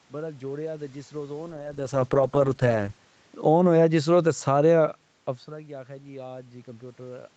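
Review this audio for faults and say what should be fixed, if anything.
From 1.5 to 3.05 s a call bitrate drop takes Opus from 32 to 9 kbps. The speech turns rough and watery, and a spectrogram shows the upper band thinning and smearing. Keeping a minimum bitrate floor would prevent it.

Between 3.32 and 4.74 s, automatic gain falling lowers the level by about 4 dB, and the waveform envelope shrinks steadily along with the background. Giving the input proper headroom would stop the AGC from backing off.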